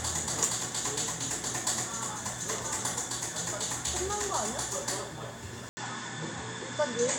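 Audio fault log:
5.69–7.19 s: input likely switched to a poorer device; after an 80 ms silence nothing passes above 8.5 kHz, dulling the sound and adding faint noise.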